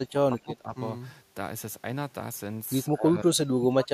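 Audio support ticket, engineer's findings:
Speech ducks hard at 0.03–0.77 s and 2.94 s to end, around 20 then 25 dB down. Likely speech suppressed in double talk: echo canceller misreading overlap as echo, attenuating both.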